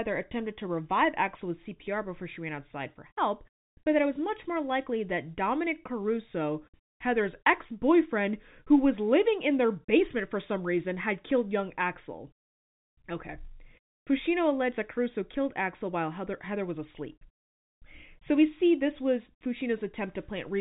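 The speech is carried over ordinary G.711 telephone coding, with nothing above about 3.8 kHz and a band limit and faint companding texture that fit a standard 64 kbps mu-law line, and no technical faults are present.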